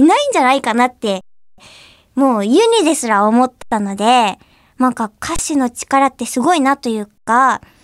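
The speech freezes on a flat, held level at 1.21 to 1.58 s, 3.62 to 3.72 s, 5.36 to 5.39 s and 7.18 to 7.27 s, then resumes softly with nothing missing. This is an underrun with held sample: the output buffer emptied, and the converter held its last value until playback continued.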